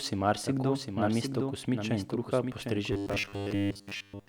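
Speech with a doubled audio track throughout: a full-band copy trails the original by roughly 0.7 s at about 5 dB lower, likely from a second, slower capture path, showing on a spectrogram as a shifted duplicate pattern. From 2.93 to 4.28 s, right after "mesto kosmičev in kruha", robotic sound from repeated short buffers appears as a rigid 100 Hz buzz, likely from 10 ms chunks repeated while most of the real audio is skipped, giving evenly spaced vertical striations.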